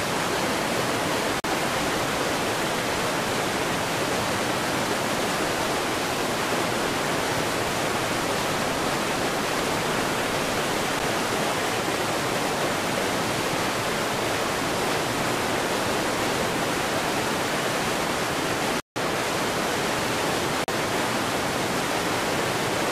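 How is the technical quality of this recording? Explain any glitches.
The recording has four dropouts, each a block of digital silence. The audio engine likely failed to fill its output buffer in time, so zeros went out instead of sound. Each edge cuts out and back with no fade: a short tick at 10.99 s (about 9 ms), short holes at 1.40–1.44 s (40 ms) and 20.64–20.68 s (40 ms), and an audible hole at 18.80–18.96 s (160 ms).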